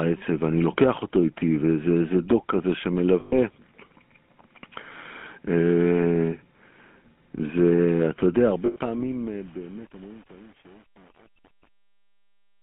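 GSM full-rate codec damage runs through the whole speech clip. The codec rebuilds each stretch from a vocal-tract filter driven by a sparse, regularly spaced pulse train, so much of the fine detail of the excitation is discarded. The result is a plainly audible buzzy, gravelly roughness on the voice, fitting the 13 kbps full-rate coder. The sound is confined to a narrow telephone band of about 200 Hz to 3.4 kHz, thin at the bottom and dull at the top.

Lost GSM frames first appear from 3.20 to 3.33 s. For about 120 ms, which fits six dropped frames, the decoder has nothing valid to play and keeps reusing the last good frame's settings. That stretch comes out as a rough, metallic ringing hold rather than a gap, then normal decoding resumes.

Truncation distortion on a fade begins at 8.39 s and lasts to the end. The gain stage keeps too few bits and adds no dither, which fits 8-bit quantisation. 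As the level drops, the waveform collapses into a handful of coarse steps. From 8.83 s the tail turns gritty.

A second run of lost GSM frames falls inside that fade, from 8.66 to 8.77 s. About 100 ms, consistent with five frames, is replaced by the same repeat of the last good frame and gives a brief metallic ring.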